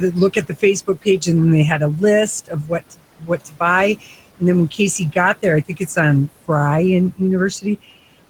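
Throughout, the background sinks between phrases and swells back under the speech. These are noise suppressor artifacts, from frame-by-frame cuts of about 18 dB aimed at room noise sitting about 18 dB below the speech.

From 0.33 to 0.63 s, 0.87 to 1.27 s, 2.45 to 3.61 s and 5.68 to 5.97 s, bits of speech turn faint or swallowed, dropping by up to about 16, 16, 19 and 14 dB. This is speech cut by the noise suppressor, which mistook those quieter sounds for noise. Around half a second is lost within the third stretch.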